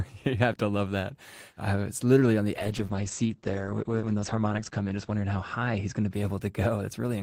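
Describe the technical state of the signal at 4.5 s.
At 4.5 s, a call bitrate drop spans 2.55–6.53 s. Coding falls from 32 to 10 kbps, and the 8 kHz cut-off leaves the speech coarse and muffled.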